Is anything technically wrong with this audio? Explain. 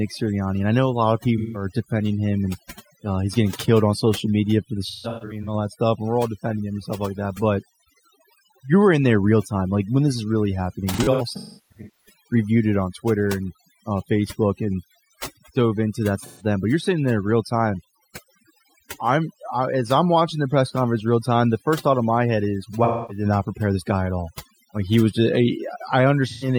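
Yes, two faults affect this speech recording.

Overdone noise removal runs through the whole clip. A noise reducer set far too aggressively is pulling down individual frequency bands wherever they sit close to its noise estimate, and it takes the quieter parts of the voice along with the noise. The background drops and breaks up into twinkling, chirpy specks.

AAC frame loss with concealment occurs six times: 1.37–1.65 s, 4.85–5.54 s, 10.93–12.11 s, 16.24–16.45 s, 22.84–23.25 s and 26.29–26.48 s. When a compressed frame goes missing, the decoder fills the gap by reusing the last good spectrum, fading it if the gap persists. The short dropouts (roughly 130 to 260 ms) sound like brief smeared, noisy or phasey patches. At 4.85 s the losses are scattered over about 0.6 s, and at 10.93 s over about a second, with a longest run of roughly 300 ms.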